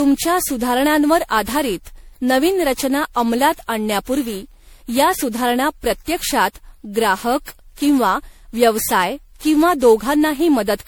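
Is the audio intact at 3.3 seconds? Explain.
No. At 3.3 s, as throughout the speech, generation loss is audible: a swirly, hollow, smeared sound with blurred attacks, likely from around fifteen MP3 passes at 96 kbit/s, each adding fresh quantisation noise. A spectrogram shows speckled holes and nothing above 20.6 kHz.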